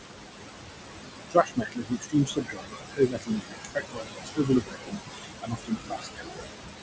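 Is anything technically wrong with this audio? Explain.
Yes. Noise suppressor artifacts run throughout: the suppressor pulls noise-classed bands down by about 21 dB frame by frame, so the background sinks between words and rises under them. A spectrogram shows blotchy, flickering background.

Speech cut by the noise suppressor appears from 1.3 to 6.44 s, about four seconds in all. Quiet speech mistaken for noise dips by up to about 21 dB, sounding swallowed, visible as gouged waveform envelopes.

The spectrogram is empty above 8 kHz, consistent with the G.722 call path.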